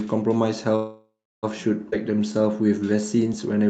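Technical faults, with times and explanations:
0.75–1.45 s, call audio freeze: the speech stops dead and the last sound is stretched into a buzzy tail that fades to near silence, with roughly the final 0.31 s quiet. This is likely packets held up in transit, leaving the jitter buffer empty, so the receiver improvises continuation sound until data returns. About 0.67 s of filler is inserted, and speech then resumes exactly where it left off, so nothing is lost, only delayed.
1.91–1.94 s, skip ahead: the audio jumps forward abruptly, with only a tiny 13 ms join between the two sides. About a fifth of a second of speech is discarded, which happens when a stretch is dropped in transit or thrown out by an overfull jitter buffer while later audio is already queued. The two edges are spliced almost directly, so the sound lurches rather than pausing, and the lag built up by the freeze shrinks by about that amount.
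2.03–3.56 s, jitter buffer slow-down: the speech plays at about 86% of normal speed but keeps its pitch, so sounds are drawn out. The buffer is rebuilding its reserve by repeating individual pitch periods and small slices of pauses many times over, adding 215 ms in total across the span. The Opus call path's high-frequency limit at 8 kHz applies throughout as well.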